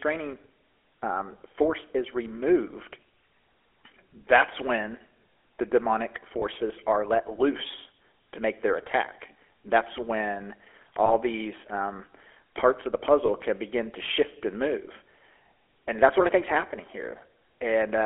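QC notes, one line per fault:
throughout: GSM full-rate codec. The speech has a buzzy, gravelly roughness from a coarse pulse-train excitation driving a vocal-tract model, consistent with the 13 kbps full-rate coder. Damage is plainly audible, and the band sits at about 300 Hz to 3.4 kHz.
6.40–6.43 s, 11.06–11.12 s, 13.26–13.30 s: lost GSM frames. Each dropout sounds like a brief rough, metallic ring, consistent with a single 20 ms frame concealed by repeating the previous good frame's parameters. All three are too short to fade to silence.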